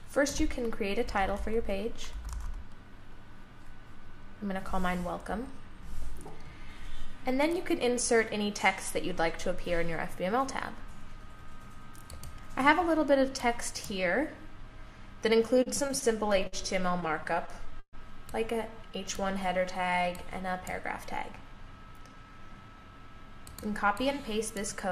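From 15.45 to 16.54 s and again from 16.92 to 17.95 s the sound drags and stutters, held over nine and then eleven brief stalls, the longest 130 ms. These are repeated stalls (stutter): the jitter buffer kept running dry, so the receiver stretched the last sound until data arrived.

Between 18.71 and 20.03 s the audio plays at 92% speed with unchanged pitch, drawn out by 116 ms. This jitter buffer slow-down repeated tiny pitch-period pieces to rebuild a depleted reserve.

From 21.86 to 24.88 s the sound hurries at 106% speed, same pitch, losing about a fifth of a second. This jitter buffer speed-up trimmed short pitch periods to shed excess buffered delay.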